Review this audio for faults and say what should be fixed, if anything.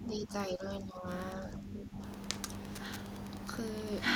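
Wi-Fi interference runs through the whole recording as a steady tick about ten times a second, sitting about 25 dB below the speech. A nearby Wi-Fi radio's beacon, repeating every 102.4 ms, is being picked up and rectified by the audio circuit. On a spectrogram it appears as evenly spaced thin vertical lines across the band. In the waveform it shows as small regular spikes in the gaps. Fix it by moving the radio away from the audio gear and shielding or filtering the input cabling.

Speech suppressed in double talk occurs from 0.0 to 1.07 s and again from 1.4 to 2.01 s. The speech dips by up to around 10 dB and thins or breaks up for about 0.7 s and 0.5 s in total. The likely cause is an echo canceller that could not separate this talker from loudspeaker echo while both sides spoke, so it turned both down. The waveform shows sudden envelope notches, and the spectrogram shows upper harmonics fading in patches. 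Prevent it with a better-tuned double-talk detector or a headset that removes the echo path.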